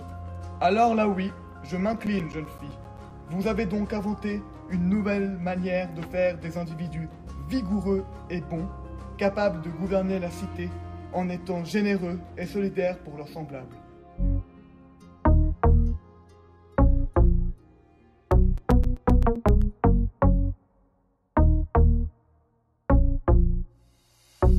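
From 1.67 to 3.36 s and again from 18.32 to 19.62 s come bursts of CD scratch ticks. A blemish on the disc defeats the error correction once per revolution, so the player patches or mutes the lost samples. The result is about eight regular clicks per second, each no longer than around 10 ms. On a waveform they appear as evenly spaced notches or spikes, and on a spectrogram as thin vertical broadband lines.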